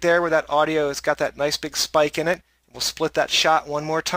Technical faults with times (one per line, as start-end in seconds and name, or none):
2.34 electrical switching spike